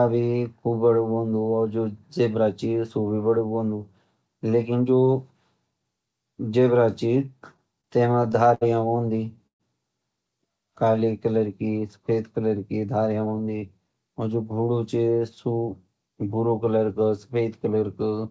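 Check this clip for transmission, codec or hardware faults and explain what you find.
Four jitter-buffer faults are audible in the speech, all clustered between 7.5 and 14.2 s. They sit on a call path whose content stops at 8 kHz, which fits a wideband G.722 link.

Repeated stalls (stutter) run from 7.54 to 8.63 s. Packets reached the receiver late or too slowly, so its jitter buffer kept running dry. Each time, it extended the last sound until data resumed. Nine such gaps occur, the longest 67 ms, totalling 171 ms, or 16% of that stretch. Nothing is lost, but the speech catches and drags in a choppy, halting rhythm.

A call audio freeze follows at 9.47 to 9.62 s. The sound briefly continues, then drops to near silence for about 110 ms before resuming where it left off. The concealed span is 128 ms, with none of the speech missing. The likely cause is packets held up in transit, emptying the buffer, after which the receiver's delay rose by 128 ms.

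A jitter buffer slow-down occurs from 10.66 to 11.07 s. With the buffer running low, the receiver rebuilt its reserve by repeating single pitch periods over and over. This added 45 ms, so playback runs at 91% speed without any change in pitch. The speech sounds drawn out across that stretch.

A jitter buffer speed-up spans 13.12 to 14.23 s, ending just before "और जो घोड़ू". Here the buffer held more audio than its target, so the receiver trimmed short pitch-period-sized pieces in quick succession. This removed about 150 ms and lifted playback to 112% speed at unchanged pitch. The passage sounds hurried.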